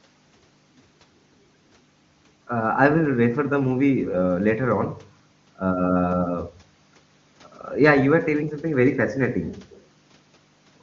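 Nothing goes wrong anywhere in this speech recording, and the AMR wideband (HD Voice) coding at 23.85 kbit/s leaves at most a faint trace of itself.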